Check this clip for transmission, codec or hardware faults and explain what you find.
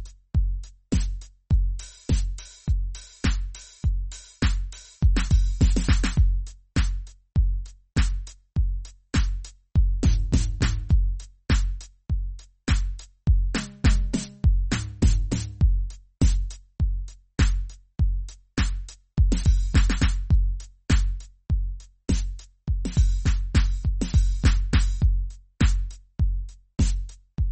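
One codec fault runs through this music. Throughout, nothing sounds above 8.3 kHz, and the sound is watery and swirly, likely MP3 compression at a low bitrate near 32 kbps, cutting treble and toggling weak frequency lines.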